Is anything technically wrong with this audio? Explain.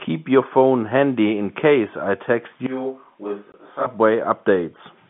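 Yes, there are two faults, one inside the other.

From 2.66 to 3.86 s, just after "in case I text", the sound abruptly turns roomy and hollow, loses low end and drops about 10 dB, with background noise rising to about 35 dB below the speech. This is likely a switch to a distant microphone, where a far pickup replaced the close one. On a spectrogram the low bands thin out and a noise floor fills the gaps; the waveform shrinks suddenly and recovers just as suddenly.

From 3.52 to 3.54 s, inside that stretch, there is packet loss filled with silence: a 20 ms hole that fits a single lost packet, which the receiver replaced with nothing. The waveform shows a flat line cut cleanly into the signal, and the spectrogram shows a narrow vertical blank stripe across every frequency. The telephone band, limited to about 150 Hz–3.5 kHz, continues through both faults.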